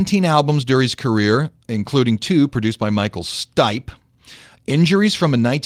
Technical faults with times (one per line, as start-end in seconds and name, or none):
none